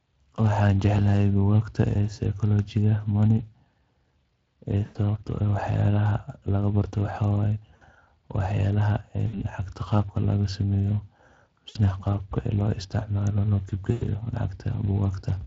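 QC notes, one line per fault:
Throughout: Speex codec. The whole clip carries that grainy, hoarse CELP texture. There's a noisy edge on the voiced parts. The damage is plainly audible and fits a setting of roughly 20 kbps, where the excitation is coded too coarsely to hold a clean pitch pulse.
4.85–4.98, 7.75–7.83, 9.27–9.42, 11.69–11.80, 13.91–14.05 s: VoIP packet loss concealed by the speech codec. The drops at 4.85 and 13.91 cost about 100 ms of audio, and the other three about 60 ms each. The 7.75 gap comes right after "laga baartoh waxawaye", and the ones at 9.27 and 11.69 lead into "qaabka laga sameeyoh" and "qaabka lo". Each time the decoder keeps replaying its last pitch and filter, so you get a short stretched smear that sags in level. Because each frame builds on the one before, the audio stays weak and a bit off for a moment after the packets come back.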